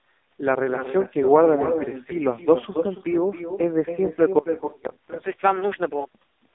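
Echo with no canceller runs throughout this speech clip. A fainter, thinner copy of the voice trails every phrase by roughly a third of a second, about 9 dB below it. That is what happens when the far end's loudspeaker feeds its own microphone and nothing removes the sound before it returns across the network. An AMR narrowband mobile codec is also present for the whole clip. Nothing survives above 3.6 kHz, and the heavy buzzy, synthetic coding damage points to one of AMR-NB's lowest modes, around 5 kbps. At that rate the vocal-tract model gets only a few pulses per subframe to rebuild each sound. The call's microphone processing has trimmed the deepest bass, which is expected.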